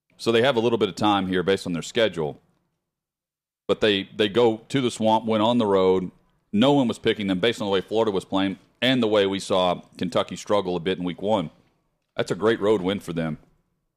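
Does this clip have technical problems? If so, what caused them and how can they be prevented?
Yes: hard clipping recurs through this speech, from 0.29 to 1.53 s (ending just before "on their"), 1.98 to 2.05 s (right after it), 3.72 to 5.89 s, 6.62 to 8.02 s, 8.83 to 9.72 s, 10.17 to 10.58 s, at 11.3 s (after "a bit in week") and 12.46 to 12.71 s. Peaks overdrove the chain by about 2 dB (about 1 dB at 11.3 s) and were sliced flat, adding a brittle crackle that soft saturation's rounder warmth lacks. Set gain with headroom so peaks stay below full scale.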